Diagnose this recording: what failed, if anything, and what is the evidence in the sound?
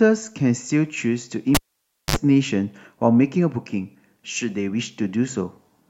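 Analogue wiring: a cable pulled and plugged in. A pop at 1.55 s drops the speech to near silence for 0.57 s. Then 58 ms of 50 Hz mains buzz sounds as only the tip touches, and a second pop at 2.16 s restores it. The waveform shows spikes around a flat gap, and the spectrogram shows broadband vertical lines and harmonic buzz stripes.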